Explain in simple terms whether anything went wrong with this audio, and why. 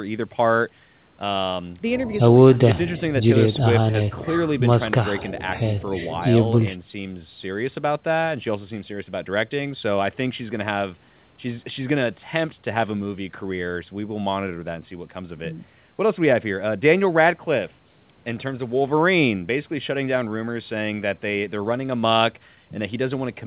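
Nothing went wrong: the speech passed through ordinary call microphone processing and a standard G.711 telephone codec on the call path, which is why nothing above 4 kHz survives and it has the narrow sound of a normal phone line.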